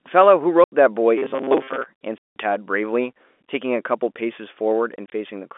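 Packet loss filled with silence cuts hard-edged holes at 0.64 s (80 ms), 2.18 s (180 ms), and in scattered 20 ms bursts from 4.96 to 5.12 s. The gap lengths fit 20 ms packets.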